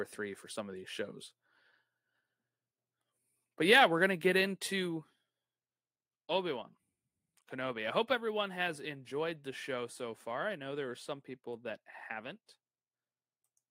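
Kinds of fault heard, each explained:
No technical faults can be heard in this speech recording.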